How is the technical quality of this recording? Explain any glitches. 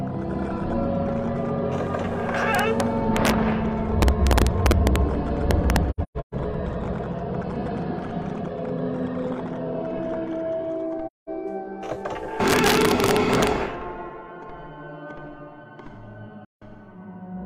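Technical quality is poor. There are two separate faults.

Integer overflow hits at 2.55–2.80 s, 3.17–3.30 s, 4.02–4.96 s, 5.51–5.76 s and 12.48–13.47 s. During these stretches the signal runs up to about 2 dB past full scale. Nothing limits it, so the samples wrap around to the opposite extreme instead of flattening at the top. Every peak that crosses the ceiling jumps across the whole range, and you hear that as harsh, violent cracks on the loud bits, far nastier than ordinary clipping.

AAC frame loss with muting shows up three times. Between 5.90 and 6.34 s about 341 ms of audio drops out in patches spread over roughly 430 ms, with the longest gap around 150 ms. There's another hole of about 213 ms at 11.06–11.29 s, and one of about 171 ms at 16.45–16.63 s. The decoder zeroed the missing frames, and because the codec's overlapping windows blend into that silence, the sound fades out and back in rather than cutting hard. 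The result is soft-edged gaps.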